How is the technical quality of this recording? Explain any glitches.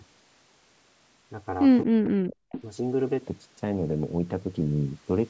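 The recording has two call-processing glitches close together, just after the 1.8-second mark.

From 1.84 to 2.5 s the speech is heavily attenuated, dropping by roughly 40 dB at its deepest over about 0.7 s. This is likely speech suppressed in double talk: with both sides active, the echo canceller couldn't distinguish the local talker from loudspeaker echo and turned everything down, so the voice ducks.

From 2.52 to 2.62 s a brief echo leak appears: a faint copy of the far side arriving 226 ms late, about 15 dB below the speech. The canceller likely didn't fully remove what the loudspeaker fed into the microphone, so this short delayed scrap was sent back. The top end stops at 8 kHz, and the call's high-pass filter trims the lowest bass as expected.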